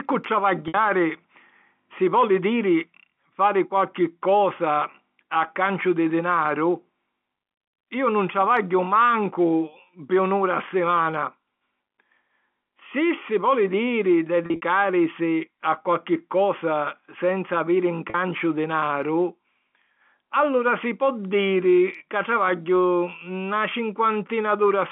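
At 0.68 s, 14.46 to 14.61 s and 18.10 s there's packet loss with pitch repetition: the receiver loops the last pitch period to cover 40 to 60 ms gaps, giving brief buzzy, held sounds.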